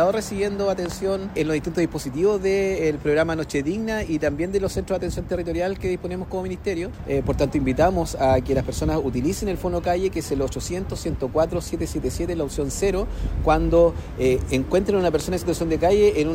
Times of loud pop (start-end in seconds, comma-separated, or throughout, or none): 0.86-0.94, 15.20-15.23